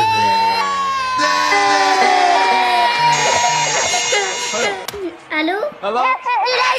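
From 1.24 s to 4.86 s, the sound was likely captured a second time by a slower path, or an edit held two copies out of step. The result is a doubled audio track: a clean full-band copy about half a second behind and roughly 5 dB quieter, starting and stopping abruptly.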